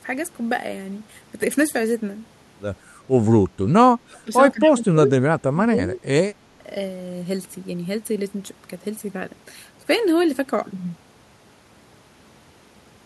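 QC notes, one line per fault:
4.0–4.29 s, 4.53–5.08 s, 5.31–6.01 s, 6.51–6.63 s: speech suppressed in double talk. The speech drops away by around 30 dB at worst and by about 10 dB in the last gap, likely an echo canceller ducking the talker along with the loudspeaker echo during overlap.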